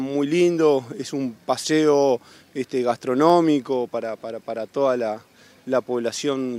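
Dropped samples at 2.09 s and again at 3.30 s: each is a single sharp click, a thin vertical line across the spectrum. The likely cause is a handful of missing samples, a tiny fraction of a millisecond, making the waveform jump abruptly to a later value.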